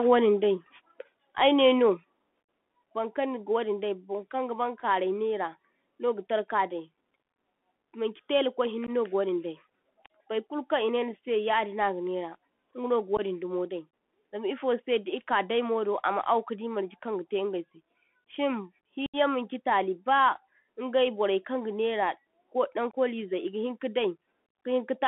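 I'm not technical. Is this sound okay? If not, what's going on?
No. Three things are going on.

Bluetooth CVSD headset codec, throughout: the speech went through the basic phone-call mode of a Bluetooth headset. This mode sends the sound as a stream of tiny up-or-down steps and keeps only a narrow band, roughly 200 Hz to 3.4 kHz. That gives the flat, boxy phone sound heard here. When loud or bright sounds change faster than the steps can follow, they distort, so s sounds turn scratchy, and a grainy hiss sits under the speech the whole way through.

Microphone volume stepped down, at 1.02 s and again at 2.04 s: the level of the speech and the background drops suddenly in a single jump each time, with the second drop a bit larger. The likely cause is the calling software deciding the microphone was too loud and turning its input volume down.

Unconcealed Bluetooth headset packet loss, four times: small chunks of sound travelling from the headset to the phone never arrived, and nothing was put in to cover the gaps. 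At 8.87 to 8.90 s, between "maŋchi tela kwai hinne" and "no ga wadin dai", about 15 ms is missing. At 13.17 to 13.20 s, just before "dai zam ifose di", another 15 ms goes missing. The longest hole is at 19.06 to 19.16 s, where about 75 ms drops out. At 22.91 to 22.95 s, right after "borai kaŋgaŋera ko daŋ", about 22 ms is lost. Each gap starts and stops abruptly.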